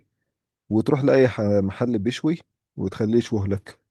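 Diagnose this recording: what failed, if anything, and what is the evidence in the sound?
Nothing in the speech points to a failure at any stage of the chain, so there is no audible technical fault to diagnose.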